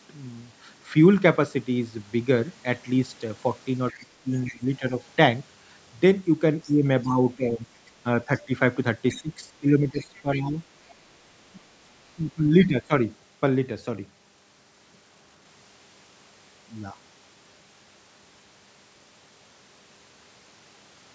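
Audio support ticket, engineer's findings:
Other side's voice leaking through. 3.9–4.58 s: faint second voice under the talker, about 20 dB down. 6.63–10.92 s: longer stretch, about 25 dB down. Probable component: echo canceller. Mechanism: far-end audio from the talker's loudspeaker re-enters the mic, and cancellation leaves a residue, likely through incomplete echo removal.

Speech suppressed in double talk. 3.99–4.95 s: talker dips by about 15 dB, roughly 0.4 s in total. 6.65–10.61 s: dips of about 15 dB, roughly 1.5 s in all. 11.53–12.92 s: deeper drops of about 20 dB, roughly 0.7 s. Component: echo canceller or suppressor. Mechanism: likely both sides talking at once, near-end voice attenuated along with the echo.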